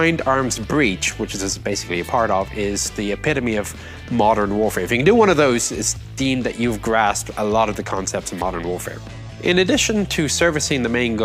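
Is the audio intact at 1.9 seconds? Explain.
Yes, the audio is intact at 1.9 seconds, with no dropout, click, distortion or other fault at that point.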